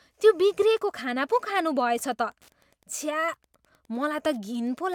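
From 0.40 s to the end of the speech, Wi-Fi interference is present: a nearby Wi-Fi radio's beacon, repeating every 102.4 ms, is rectified by the audio circuit. It produces a steady, faint ticking about ten times per second, well below the speech level.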